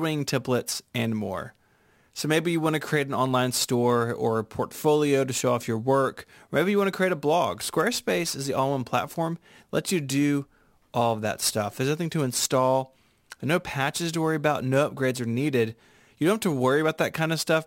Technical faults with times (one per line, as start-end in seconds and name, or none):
0.00-17.66 crude rate conversion